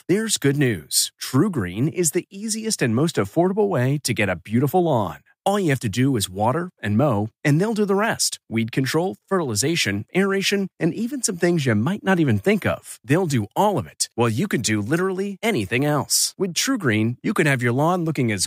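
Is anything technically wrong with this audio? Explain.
No, nothing is technically wrong with this audio.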